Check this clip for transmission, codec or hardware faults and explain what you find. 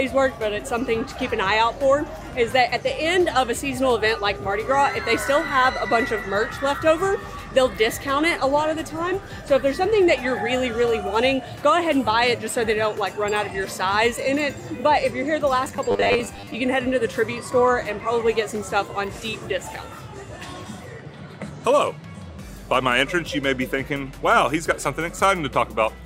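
One fault stands out. Robotic sound from repeated short buffers, 15.65 to 16.55 s: a rigid metallic buzz at 100 Hz, likely from late-arriving audio being padded by looping a 10 ms fragment. Roughly two-fifths of that stretch is repeats, skipping the real sound.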